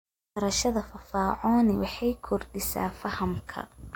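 From 2.16 s to the end at 3.96 s, a switching supply whistle appears: a power supply's converter cycling in an audible burst mode. The thin high whistle sits about 40 dB below the speech and drifts between about 11.0 and 11.2 kHz. A spectrogram shows a faint, slightly wandering horizontal line.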